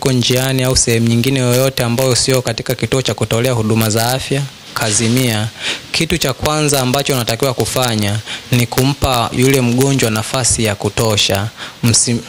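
Integer overflow runs through the whole clip. Somewhere in the chain a gain or sum pushed the signal about 1 dB past the largest value the integer format can hold, and instead of being limited, those samples wrapped around to the opposite sign. Only a very small share of samples, on the order of a twentieth of a percent, cross the limit, so the damage lands on the loudest peaks as isolated cracks, sharper than ordinary clipping.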